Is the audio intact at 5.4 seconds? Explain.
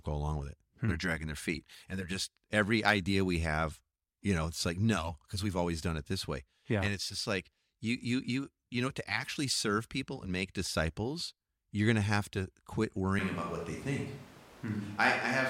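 Yes, at 5.4 s the speech plays through intact, with no audible dropout, click, distortion or other fault at that moment.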